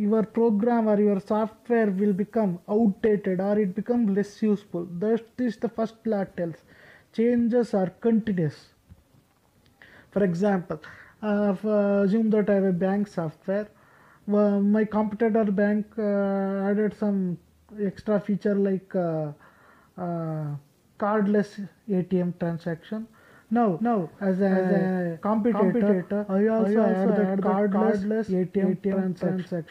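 From 23.79 s to the end the audio carries a doubled audio track: a second full-band copy trails by about 300 ms at roughly equal level, with no decay or room colour, switching in abruptly. Likely cause is a second, slower capture path or an out-of-step edit.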